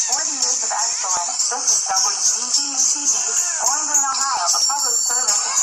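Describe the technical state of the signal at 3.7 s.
At 3.7 s the signal sits inside a run of periodic USB or driver dropouts spanning 0.19 to 5.36 s. Every 0.246 s something stalls the bus or driver and a few milliseconds of audio are skipped outright, so the waveform jumps ahead and leaves a small tick. What separates this from random network packet loss is the strict spacing, about four ticks per second, heard only while sound is present, never in quiet gaps.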